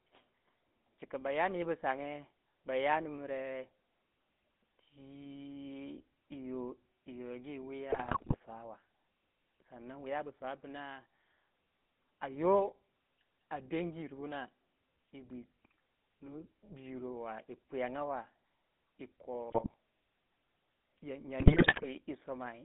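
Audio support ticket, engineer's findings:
Buzzy, gravelly speech throughout, band roughly 200 Hz to 3.6 kHz. GSM full-rate codec, consistent with 13 kbps. Pulse-excited vocal-tract model, sparse excitation, plainly audible roughness.

Squawks, pops and gargling at 7.9–8.36 s, 19.50–19.74 s, 21.40–21.87 s. GSM bit errors. Corrupted filter, pitch or gain values distort spectrum and level per frame.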